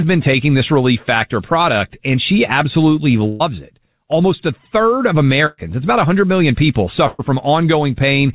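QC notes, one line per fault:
3.28–3.42 s, 5.46–5.59 s, 7.07–7.21 s: burst of packet loss. Roughly 120 ms of audio is lost each time, and concealment stretches the preceding sound into a fading buzz or hiss. On a spectrogram this appears as smeared, decaying bands below the 4 kHz ceiling, with no silent gap, followed by an abrupt jump forward.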